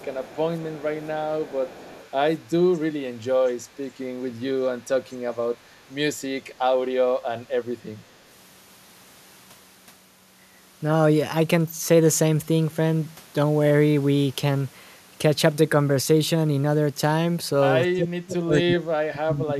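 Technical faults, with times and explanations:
0.00–0.38 s, 0.61–0.83 s, 1.02–1.07 s, 1.41–2.10 s and 3.16–3.26 s, echo leak: the far end's echo canceller likely left part of its loudspeaker signal in the microphone feed, which was sent back. A faint copy of the speech trails the original by 240 ms, sitting roughly 25 dB under it in the first four stretches and near 40 dB under it at 3.16 s. It surfaces in short scraps rather than steadily.
17.93–19.60 s, speech suppressed in double talk: with both sides talking at once, the echo canceller likely could not tell the local talker from the returning echo and attenuated everything it picked up. The near-side speech drops in pieces, by as much as roughly 35 dB at its deepest. About a second and a half in total is lost or thinned, running right up to the end of the clip.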